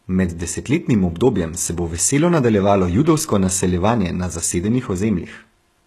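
HE-AAC compression damage runs through the whole of this speech recording, and it is plainly audible. Nothing is present above 12.3 kHz. The treble that remains sounds synthetic, likely from spectral band replication: lower bands are copied upward and given only a rough envelope, so the upper harmonics no longer line up with the ones below the crossover. S sounds come out gritty and lispy, which fits a very low bitrate of around 16 kbps.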